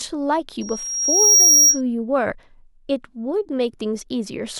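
At 0.61 s a loudspeaker feedback squeal kicks in and runs until 1.81 s. The mic is hearing the speaker it's driving, and at 5.6 kHz the loop gain tips past one, so that frequency feeds itself. You can hear a thin, piercing tone swell over roughly three-quarters of a second until it's sitting something like 10 dB above the speech, then it drops out.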